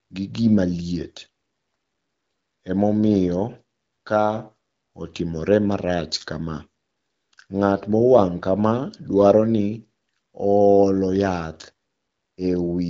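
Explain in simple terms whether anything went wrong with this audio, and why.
Nothing went wrong here: the speech comes through the AMR wideband (HD Voice) phone codec as intended, carrying sound up to about 7.7 kHz, which gives it the slightly narrowed but clear quality of an HD Voice call.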